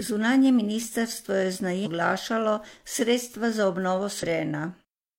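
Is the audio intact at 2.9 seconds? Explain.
Yes, the audio is intact at 2.9 seconds, with no audible fault at that moment.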